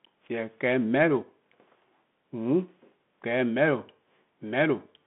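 Throughout the speech, the Bluetooth CVSD headset codec confines the sound to roughly 150 Hz to 3.5 kHz, with nothing above 3.8 kHz. Its one-bit, adaptive-step delta coding leaves granular hiss, scratchy s sounds and plainly audible slope-overload distortion on loud high content.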